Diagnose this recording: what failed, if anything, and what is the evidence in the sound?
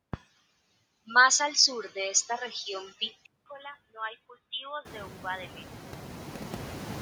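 Call processing is at work across the whole clip. Noise suppressor artifacts sit under the speech: the background dips by about 6 dB between phrases and comes back underneath them.

From 3.26 s to 6.29 s the speech goes dull, with a narrower band. That stretch starts after a 200 ms gap, sits a few dB quieter, and carries its own faint background noise. It's likely the input switched to a poorer device. The room noise jump around 5 s is genuine room sound.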